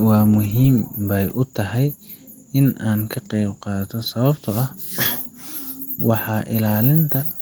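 Nothing to flag: no audible technical faults anywhere in the speech.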